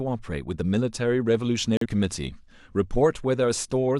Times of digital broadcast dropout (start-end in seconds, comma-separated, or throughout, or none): 1.77-1.86